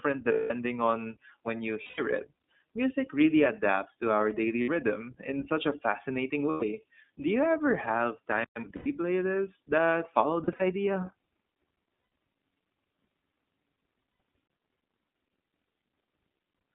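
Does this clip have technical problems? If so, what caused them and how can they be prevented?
Yes. The speech was carried over the iLBC codec at what sounds like 15.2 kbps, which fits 20 ms frames. The line passes roughly 200 Hz to 3.6 kHz, and the coding damage is plainly audible as a narrow, slightly rough and synthetic voice. Using a wideband codec such as Opus would prevent this.

Lost iLBC frames come from dropped packets. The decoder bridges each gap by repeating the last pitch cycle mixed with noise, which gives a held, buzzy vowel. This happens at 0.32 s for 180 ms (just before "on when you"), at 1.82 s for 160 ms, at 4.62 s for 60 ms (between "really adapts to our" and "in such a fascinating"), and at 6.50 s for 120 ms. It happens again at 8.76 s for 100 ms (between "ever have time of" and "playlists that follow"), at 10.44 s, where 100 ms of loss is scattered over 160 ms in short runs, at 12.00 s for 120 ms, and at 14.10 s for 100 ms. 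Reducing network packet loss, or adding forward error correction and a jitter buffer, would prevent these gaps.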